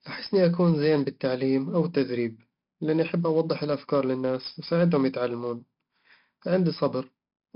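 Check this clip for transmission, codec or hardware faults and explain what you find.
One codec fault affects the whole clip. 4-bit ADPCM compression, throughout: each sample is coded as a coarse 4-bit step from a prediction, so heavy level-following grit rides on the speech and sharp onsets smear. Nothing sounds above 5.3 kHz, which fits a bitrate near 44 kbps.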